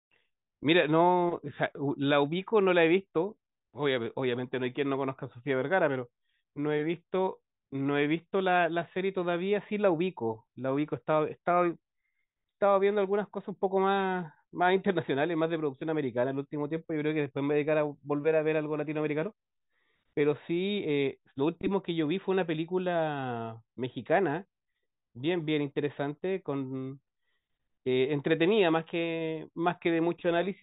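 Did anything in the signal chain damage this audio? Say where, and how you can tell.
No, nothing in the signal chain has damaged this speech recording. No stage of capture, conversion, transmission, storage or playback leaves an audible mark on it.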